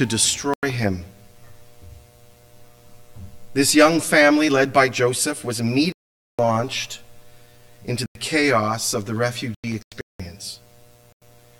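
From 0.44 s to the end, the audio carries channel delay (comb filtering). One channel lags the other by roughly 10 ms, and the mono sum cancels at evenly spaced frequencies starting near 50 Hz. The result is a hollow, phasey tone whose notches stay fixed rather than sweeping as a flanger's would. Corrupt frames are muted at 0.54–0.81 s, 5.92–6.67 s, 8.06–8.20 s, 9.55–10.20 s and 11.12–11.28 s. Each gap cuts abruptly to silence, with no interpolated fill, and the timing around each gap stays intact. That distinguishes these holes from packet-loss concealment or buffer underruns.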